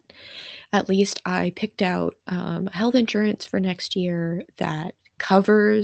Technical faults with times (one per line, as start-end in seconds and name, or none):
4.96-5.55 jitter buffer slow-down